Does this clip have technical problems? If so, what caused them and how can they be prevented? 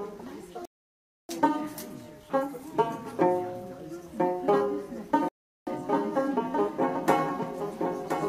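Yes. There are two kinds of fault.

A rebuffering stall cuts the sound to silence from 0.65 to 1.29 s, and again from 5.29 to 5.67 s. Each time, playback picks up exactly where it stopped. Nothing is missing. The gaps add 0.64 s and 0.38 s to the running time. The player ran out of downloaded audio and waited for more to arrive. A larger startup buffer, or adaptive bitrate switching, would prevent these stalls.

A doubled audio track begins abruptly at 4.59 s and lasts to the end. A second full-band copy of the sound trails the original by about a second, somewhat quieter. It has no decay or room colour, so it is not an echo from a space. The likely cause is the same audio being captured twice, once through a slower path, or an edit leaving two copies out of step. Muting the duplicate route or removing the extra copy in the edit would prevent it.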